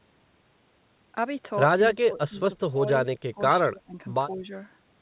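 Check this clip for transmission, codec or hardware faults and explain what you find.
One fault type is present: the speech dips repeatedly from about 2 s onward, consistent with speech suppressed in double talk. The dips fall at 1.95–2.39 s, 2.69–2.81 s, 3.16–3.40 s, 3.68–3.97 s and 4.36–4.43 s. The level sinks by about 25 dB in the first, about 15 dB in the second and third, about 20 dB in the fourth, and only about 5 dB in the last, so parts of the speech thin out or nearly vanish. The likely cause is an echo canceller failing to separate the near-end talker from the loudspeaker echo of overlapping far-end sound and attenuating the near-end talker along with it. The band-limiting, with nothing above 4 kHz, points to a narrowband call codec such as G.711.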